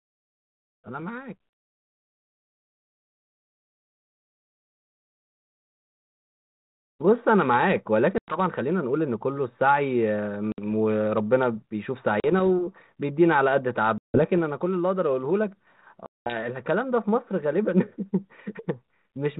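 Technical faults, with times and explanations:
8.18–8.38 s, 10.52–10.59 s, 12.2–12.41 s, 13.98–14.2 s, 16.06–16.34 s: packet loss on an ADPCM call. Dropped packets leave hard-edged gaps of 100, 60, 40, 160 and 200 ms, and the 32 kbit/s G.726 decoder's predictor and step size lose sync. Speech resumes with brief distortion.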